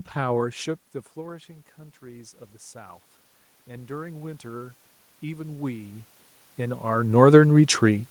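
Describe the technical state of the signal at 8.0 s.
At 8.0 s the speech signal is intact, with only the background noise of the room present as part of the recording.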